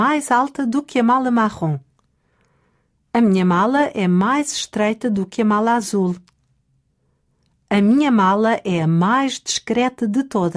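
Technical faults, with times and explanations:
No technical faults are audible anywhere in this clip.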